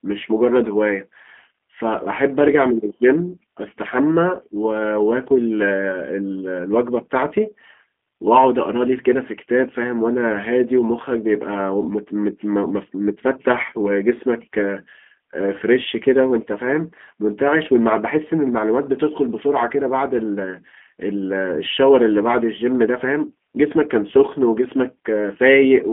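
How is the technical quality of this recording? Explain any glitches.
The recording is clearly degraded throughout by G.729 codec coding, a telephone-style speech codec whose damage is plainly audible from start to finish.

The G.729 codec fault runs through the whole clip. The sound occupies roughly a 200 Hz to 3.4 kHz line band, with nothing above 3.7 kHz. The character fits G.729A at 8 kbit/s, which rebuilds speech from a vocal tract model, a pitch predictor and a few pulses per frame. A plain telephone filter would only sound narrow and muffled. Here the speech also has a rough, buzzy, slightly synthetic texture.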